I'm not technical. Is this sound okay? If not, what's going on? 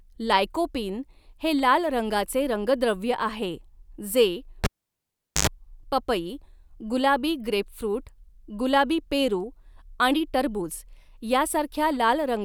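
No, there's one problem. At about 4.64 s you hear a cable pulled and plugged in: a pop as the lead comes out, then the speech drops to near silence for roughly three quarters of a second. As the plug goes back in, only its tip touches first, so for under a tenth of a second you get a low 50 Hz mains buzz, then another pop as the sound comes back at about 5.47 s.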